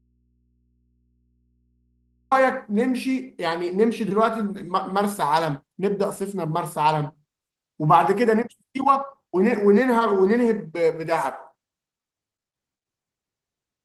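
Right from the start the speech is already gone, and it stays gone until about 2.31 s. What fills that stretch is a low mains hum sitting roughly 45 dB below where the speech lands once it arrives. That's an audio dropout to a faint residue, likely a signal lost upstream while the input stayed open and picked up hum. The speech then snaps in abruptly rather than fading up, and from there it carries the light texture of Opus voice compression.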